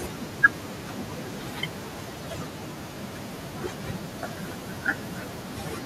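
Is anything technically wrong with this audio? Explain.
Yes. Throughout the speech, from 0 to 5.86 s, there's speech cut by the noise suppressor: it mistakes quieter speech for noise and pulls it down up to about 13 dB, so endings sound swallowed. The room noise sits about 23 dB under the speech.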